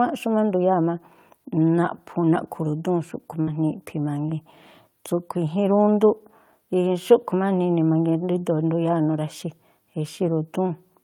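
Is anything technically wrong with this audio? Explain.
Yes, the speech has one fault. A burst of packet loss at 3.41 to 3.49 s: several consecutive packets never arrived in time, so the receiver stretched the last sound for about 57 ms, fading it into a held, decaying tail, then resumed with roughly 60 ms of speech skipped.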